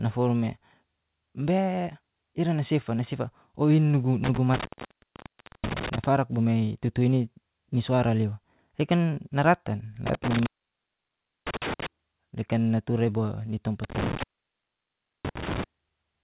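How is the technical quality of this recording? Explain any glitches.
The recording has two kinds of glitch: three dropouts from a failing connection and one brief concealed gap from the call path. The audio is band-limited with nothing above 4 kHz, which fits G.711 mu-law at 64 kbps.

Intermittent contact, 4.24–6.04 s, 10.07–11.86 s and 13.84–15.64 s. A loose plug or cable connection breaks the signal path, and each time the line stays open for about 1.0 s. The speech cuts out abruptly with crackle as the contact breaks and remakes, and faint hiss remains during each gap.

Short concealed packet loss, 9.14–9.18 s. About 20 ms of audio never reached the decoder, which fits a single lost 20 ms packet. The receiver bridged the hole with about 21 ms of synthesized continuation, extending the preceding sound and then blending back into the real signal. The result is a brief smear or wobble in the speech, and a short consonant at that point may be lost.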